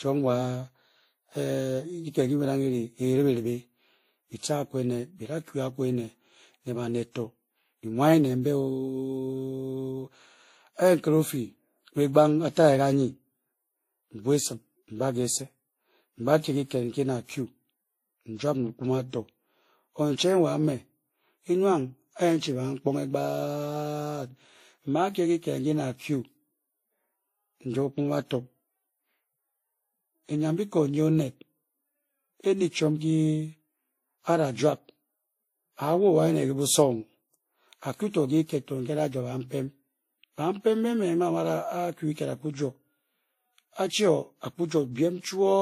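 Throughout the speech, swirly smeared highs and a gritty, watery texture sit together, with nothing above 15.2 kHz. This is transcoding between lossy codecs, likely WMA near 48 kbit/s re-encoded as Vorbis near 37 kbit/s. A spectrogram shows a flat ceiling at 15.2 kHz and blotchy high bands.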